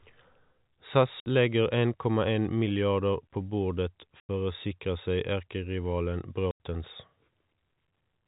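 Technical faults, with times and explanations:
1.2 s, 4.2 s and 6.51 s: packet loss filled with silence. The telephone-band speech drops out for 60 ms, then 90 ms twice. Missing packets were replaced by digital silence, so each hole has hard edges. The lengths fit 30 ms packets.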